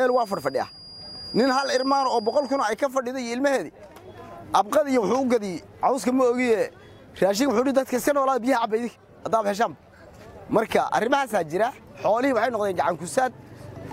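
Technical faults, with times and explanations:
0.00–2.79 s, feedback whistle: there's a thin, steady tone at about 4.8 kHz sitting roughly 15 dB under the sound for the first couple of seconds, wobbling a bit in level before it drops out. That's most likely a speaker-to-mic loop parked right at the edge of feedback, where one high frequency keeps recirculating and ringing on without actually building up into a full howl.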